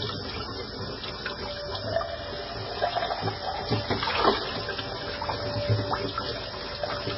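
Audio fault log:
throughout, MP3 compression: the encoder was likely starved of bits, at a rate that fits a very low bitrate of around 16 kbps, so it cut all treble at a fixed point and zeroed its weaker frequency lines. Nothing sounds above 5.6 kHz, leaving the audio dull and boxed in. The dropped lines flicker on and off from frame to frame, giving heavy watery, swirling artefacts, and sharp onsets are smeared rather than crisp.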